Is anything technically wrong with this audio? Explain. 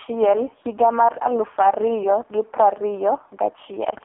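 Yes. Throughout the speech, an AMR narrowband mobile codec limits the band to roughly 300 Hz to 3.5 kHz, with nothing above 3.6 kHz. The heavy buzzy, synthetic quality of the vocal-tract model points to AMR-NB's lowest mode, around 4.75 kbps. A plain telephone band filter would narrow the sound without making it buzzy or synthetic.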